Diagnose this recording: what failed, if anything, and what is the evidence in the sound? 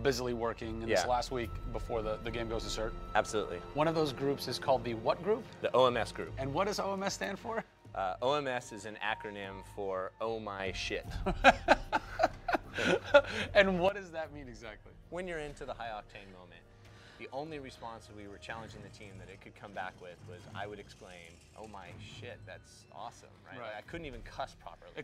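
Sudden gain jumps, likely from a digital gain stage switched without a ramp. Sound and noise floor fall together by about 6 dB from 7.62 to 10.60 s, then by about 12 dB from 13.89 s onward. The waveform envelope steps abruptly, and the spectrogram darkens evenly across all frequencies.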